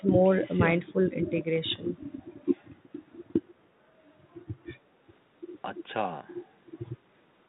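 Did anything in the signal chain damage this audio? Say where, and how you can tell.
No, the speech passes through a G.726 ADPCM stage at 32 kbit/s, the DECT-style rate, which limits it to the telephone band below 4 kHz and adds only the light, level-following quantisation noise expected at that rate, with no sign of damage from any other stage in the chain.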